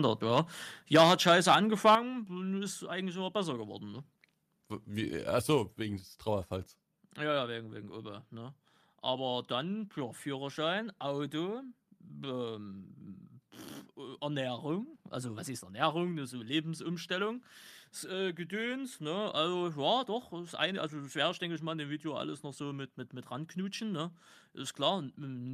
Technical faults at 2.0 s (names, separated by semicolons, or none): microphone overload; microphone volume stepped down